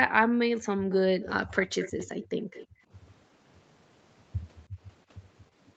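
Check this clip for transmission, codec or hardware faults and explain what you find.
Two faults tied to loudspeaker playback on a call appear in this speech: the background gated by the echo canceller, and an echo leak. Both sit inside a band that stops at 8 kHz, as expected from the call's processing and Opus coding.

Background gated by the echo canceller, at 0.80 to 0.91 s, 2.67 to 2.88 s and 4.68 to 4.79 s: the room tone briefly sinks, by about 24, 28 and 16 dB, each dip lasting roughly a tenth to a fifth of a second. The canceller clamped the microphone while it judged the far end to be playing, then released it. Unlike a packet dropout, the speech continues and only the ambience falls away, with no clicks or repeated fragments.

Echo leak, at 0.91 to 0.95 s, 1.22 to 1.29 s, 1.63 to 2.27 s and 2.53 to 2.67 s: a faint copy of the speech trails it by 223 ms, roughly 15 to 25 dB down, strongest in the long stretch from 1.63 s. 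The likely cause is a loudspeaker at one end whose echo canceller let part of the pickup through, so it was sent back. It differs from room reverberation because it is one discrete, fixed-delay repeat that comes and goes, not a smooth decaying tail.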